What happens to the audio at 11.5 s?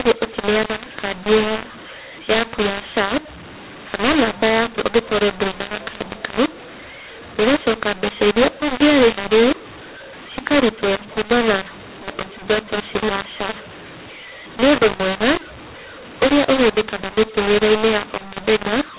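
At 11.5 s the speech is harsh and distorted, with levels scrambled and pauses filled with noise, as it is for the whole clip. This is mu-law and A-law mixed up: telephone audio coded with mu-law is decoded as A-law, mis-scaling every sample.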